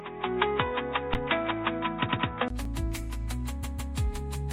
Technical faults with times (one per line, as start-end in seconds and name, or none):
0.00-4.52 MP3 compression
0.00-2.50 input switched to a poorer device
1.14 underrun with held sample
2.05-2.26 repeated frames
2.65 underrun with held sample
3.62-3.93 repeated frames